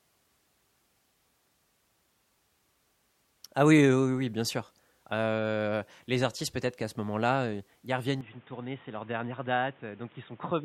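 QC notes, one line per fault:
8.21–10.64 s: input switched to a poorer device, likely; speech abruptly dulls, spectrogram empty above 3.8 kHz, waveform about 5 dB lower, faint new background noise.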